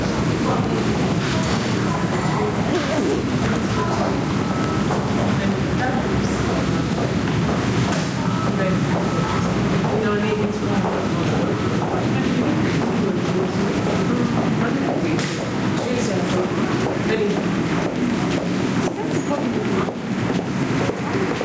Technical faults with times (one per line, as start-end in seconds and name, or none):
0.00-21.45 gain pumping